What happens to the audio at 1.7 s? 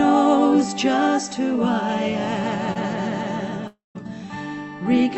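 Nothing goes wrong at 1.7 s: the audio runs intact through the WebRTC call path there, with no dropout, glitch or distortion at that point.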